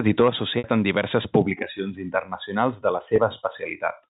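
Packet loss with pitch repetition at 0.58 to 0.64 s and 3.16 to 3.18 s: repeating the last pitch period covered the 20 ms gap with a brief held buzz, while in the 60 ms gap it faded into silence before speech returned with a short cross-fade.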